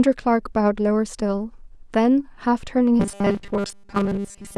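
This speech clip most likely suffers from starved audio buffers from 3.00 s to the end at 4.57 s, with playback refilling gaps by repeating about 5 ms of sound for most of that stretch. The result is robotic sound from repeated short buffers: a rigid, metallic 200 Hz buzz that only loosely tracks the speech.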